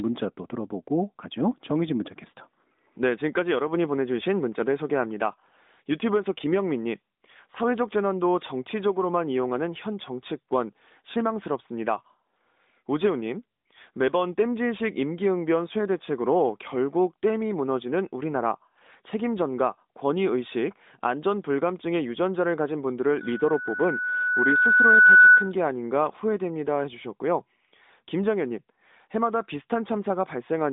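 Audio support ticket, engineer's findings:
Loudspeaker feedback squeal, 23.20 to 25.52 s. A single 1.5 kHz tone swells over roughly two seconds to around 10 dB above the speech. The mic is hearing its own speaker, with loop gain over one at that frequency, so the tone keeps feeding itself until the loop breaks. It sits inside the AMR-NB narrowband line, which cuts everything above 3.8 kHz.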